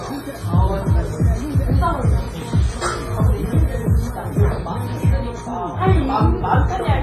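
A recording of everyday sounds, carrying heavy codec damage from start to finish. Transients ring and smear across tens of milliseconds, quieter detail is washed out, and a hiss rises and falls with the signal, while nothing remains above about 15.3 kHz. The likely cause is WMA compression: a long-block transform coder spreading quantisation noise in time and zeroing weaker spectral lines, a degree of loss that fits a low bitrate around 24 kbps.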